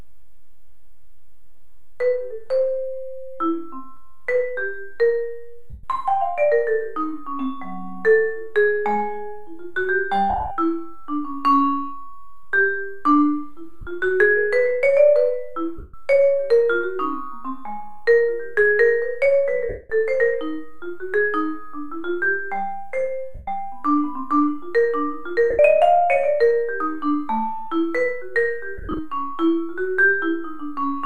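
Lost LE Audio frames show up eight times, at 5.70, 10.30, 13.81, 15.77, 19.69, 23.35, 25.50 and 28.78 s. Each gap lasts between about 50 and 200 ms, which fits missing 7.5 ms LC3 frames. The decoder fills in by replaying the last spectrum with randomised signs, so tones smear into noise and then fade after the first few frames. At 10.30 and 28.78 s the losses are scattered over about 210 ms, in runs of up to roughly 50 ms.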